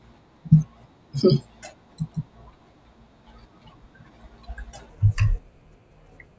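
From 4.90 s to the end, the speech slows to two-thirds speed and drops about 7 semitones: a wrong sample rate, audio captured at a rate consistent with 24 kHz but played as if 16 kHz. On a spectrogram, harmonics compress downward and stretch in time.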